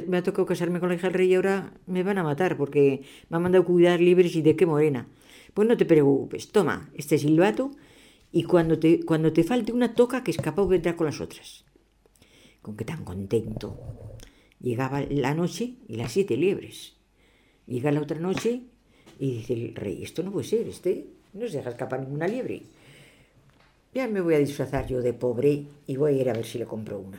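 Nothing in the audio points to a technical fault. There is no moment in it that needs a timestamp or a closer look.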